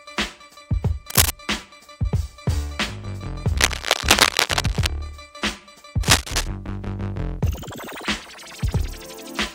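Cable scratch noise appears at 1.10 to 1.30 s, 3.56 to 4.89 s and 6.03 to 6.48 s: dense, uneven rustling bursts about 5 dB louder than the sound, likely from a worn cable or connector being moved.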